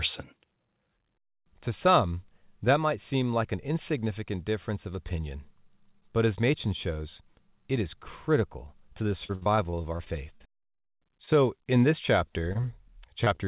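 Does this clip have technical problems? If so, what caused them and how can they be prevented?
Yes. Between 9.24 and 10.88 s the connection suffered repeated packet loss, producing a robotic sound. More than a dozen holes opened in quick succession, the longest 62 ms, adding up to about 0.3 s of missing audio. The receiver patched each hole by extending the last sound, so about a fifth of that stretch is synthetic. This makes the sound choppy and robotic, with fragments gone. A steadier network path, or forward error correction that carries redundant data, would prevent this.

At 12.53 to 12.57 s and again at 12.61 to 12.65 s, there is a short stall from a late packet each time. A packet arrived late, the jitter buffer ran dry, and the receiver held the current sound for about 20 ms and then about 16 ms until the data turned up. Nothing is lost, but the sound lingers unnaturally with a faint buzz. 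An adaptive jitter buffer with a little more headroom would absorb delay swings like these.

Near the end, from 13.25 to 13.28 s and from 13.36 to 13.40 s, there are two short concealed packet losses. Each time, about 20 ms of audio never reached the decoder in time, and the gap was filled with a continuation of the preceding sound before blending back. The result is a pair of brief smears or wobbles. This band-limited call path cuts everything above 4 kHz, which points to G.711 A-law at 64 kbps. Reducing packet loss on the link, or adding redundancy, would prevent these.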